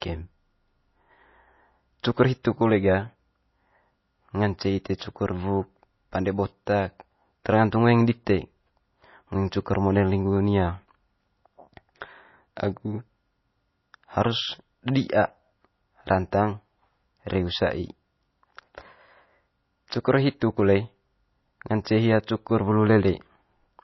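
Throughout, the speech sounds watery and dull, with nothing above 5.8 kHz; this is likely MP3 compression at a starved bitrate, fitting roughly 24 kbps.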